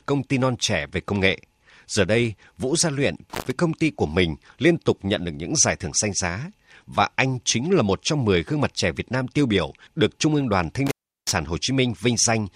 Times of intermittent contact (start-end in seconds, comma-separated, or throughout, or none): 3.30-3.51, 10.87-11.32